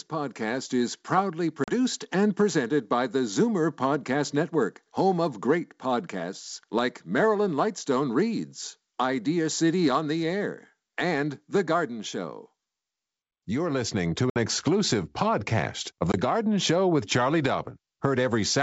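Hard-edged silent holes break the speech three times: at 1.64 to 1.73 s, between "podcast is proudly" and "and presented by the"; at 14.30 to 14.37 s, after "listening to"; and at 16.12 to 16.18 s, after "exclusive podcast of". Each time the sound returns slightly distorted. This is packet loss on an ADPCM call. About 40, 60 and 20 ms of audio went missing, and the decoder's predictor and step size lost track of the sender's, which left the sound briefly off after each gap. The G.722 wideband coding on the rest of the call adds at most a faint upper-band hiss.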